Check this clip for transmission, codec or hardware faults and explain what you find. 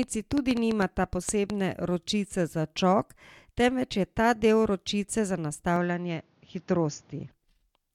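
Two faults are audible in this speech clip.

From 0.03 to 1.51 s there is a train of clicks: about ten identically shaped pops at roughly 5.4 per second, irregularly spaced and about 15 dB above the speech. The likely cause is electrical interference or a struggling interface. The repeated identical shape distinguishes it from random crackle.

From 5.76 to 7.32 s the input switches to a poorer device. Nothing is present above 6.9 kHz, the tone dulls, and a new noise floor appears about 35 dB down, with no gap and no level jump. That fresh noise points to a likely device change rather than a codec narrowing the bandwidth.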